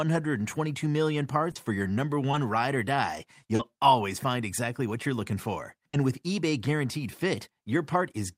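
At 1.51 to 1.57 s, 2.31 to 2.35 s, 3.55 to 3.61 s and 5.89 to 5.95 s, the speech shows short concealed packet loss. About 40 ms went missing each time (20 ms at 2.31 s), and the receiver covered the gap by extending the preceding sound before blending back. Each spot is a brief smear or wobble. On a spectrogram, harmonics or a noise band run on unnaturally steady, and the waveform shows a repeated stretch merging into the real signal.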